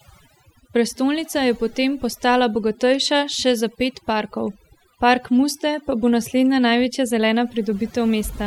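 A speech recording with overdone noise removal from start to finish. A noise reduction stage was pushed too hard on a noisy source. It drives individual frequency bands down or out whenever they sit close to its noise estimate. Quiet parts of the voice get caught too. Between phrases the background drops, dotted with twinkling specks.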